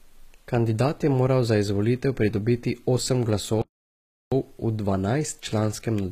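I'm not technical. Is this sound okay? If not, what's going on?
No. HE-AAC compression, throughout: the speech likely went through a low-quality encoder that rebuilds the treble from copied lower sound, so the s sounds come out gritty and metallic.

Playback stall, 3.62 to 4.32 s: the speech cuts to silence for about 0.7 s and then carries on, likely because the player briefly ran out of data.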